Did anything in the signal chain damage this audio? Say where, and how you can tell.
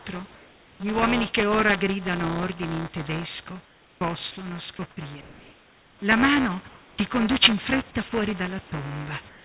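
Yes. Buffer tearing in the driver/buffer stage: a steady 200 Hz rattle under the speech throughout, where a small slice of each period replays audio about 10 ms old.

Comfort noise in place of the background, likely from call-side discontinuous transmission: at 0.35–0.8 s before "uomini che ora gridano", 6.68–6.98 s before "conduce in fretta", and 9.29 s to the end, the background turns flat and featureless, about 1–2 dB quieter.

Sound chopped by the voice detector, likely in call processing: across 3.65–6.02 s, quiet stretches keep switching to synthetic fill, so the speech sounds choppy.

Sound dropped by the voice detector, likely again at the sender: brief holes at 8.09–8.12 s, just after "conduce in fretta", and at 8.69–8.72 s, where about 20 ms of speech becomes steady noise.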